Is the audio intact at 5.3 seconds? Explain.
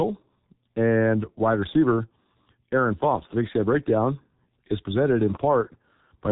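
No. At 5.3 seconds the speech is still carrying G.723.1 codec damage, which runs through the entire clip. The codec coded the audio in 30 ms frames and updated its model of the voice slowly, and the heavy smearing fits a rate near 6.3 kbit/s. Nothing above 3.8 kHz survives, so the speech sounds muffled and hoarse, with consonants blurred into the surrounding vowels.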